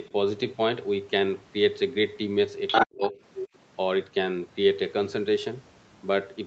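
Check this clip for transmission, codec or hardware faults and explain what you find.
Two related faults sit between about 2.7 and 3.5 s of this speech clip, carried through call microphone processing that cuts everything above 8 kHz.

Other side's voice leaking through: from 2.67 to 2.87 s a second voice intrudes, louder than the talker. Fainter scraps follow at 3.04–3.10 s and 3.34–3.48 s. This is likely residual loudspeaker echo that the echo canceller failed to remove.

Speech suppressed in double talk: from 2.84 to 3.17 s the talker's voice drops sharply, almost to silence, for about a third of a second, probably because the canceller attenuated both overlapping voices.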